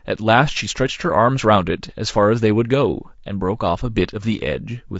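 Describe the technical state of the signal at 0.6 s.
At 0.6 s the speech sounds rough and grainy, with noise between harmonics, likely from low-delay AAC compression throughout, coded at a low bitrate near 32 kbps.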